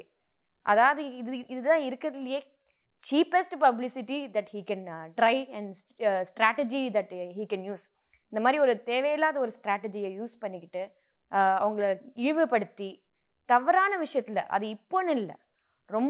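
No faults are audible in the speech, which has come through a call link with nothing above 4 kHz, consistent with G.711 A-law coding at 64 kbps.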